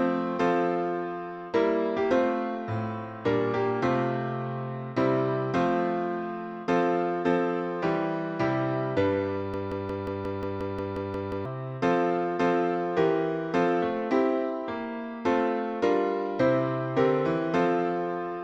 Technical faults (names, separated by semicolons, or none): broken-record loop